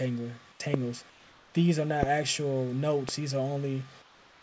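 The audio has passed through a call link whose bandwidth stops at 8 kHz, which points to a wideband codec such as G.722. Comfort noise in place of the background appears at 0.52–0.60 s, 1.10–1.54 s and 4.02–4.42 s: the real background, about 28 dB below the loud parts, gives way to a flat, featureless hiss about 4 dB quieter, likely from discontinuous transmission with receiver-generated noise. A loud pop lands at 0.74–0.76 s, 2.03–2.05 s and 3.09–3.11 s, each a single sharp transient peaking roughly 20 dB above the signal, likely a voltage step from a plug, switch, static or driver glitch.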